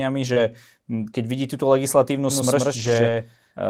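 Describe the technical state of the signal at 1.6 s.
At 1.6 s the speech signal is intact, with no dropout, distortion, glitch or other fault to be heard at that point.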